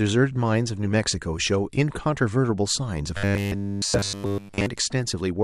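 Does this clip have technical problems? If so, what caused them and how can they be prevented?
Yes. From 3.17 to 4.66 s the speech becomes a rigid, metallic buzz at 100 Hz, robotic sound from repeated short buffers. The likely cause is starved playback looping a 10 ms chunk throughout. Larger buffers or steadier audio delivery prevent it.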